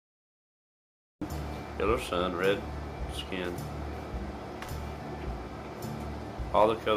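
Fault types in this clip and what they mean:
Cut-off start: the first 1.22 s are pure digital silence, then at 1.22 s the sound jumps in abruptly, already in progress, with no natural attack or fade-in, because the recording or stream only began after that sound had started.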